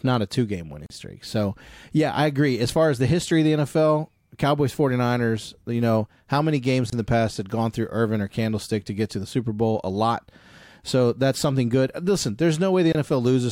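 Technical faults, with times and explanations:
0.86–0.90 s, 6.90–6.92 s and 12.92–12.95 s, gap at a join of encoded pieces: the speech was encoded in separately coded segments about 6 s apart and joined without trimming each run's start-up delay and final-frame padding. Gaps of about 37, 24 and 24 ms cut into the speech, with smeared edges, before it resumes where it stopped.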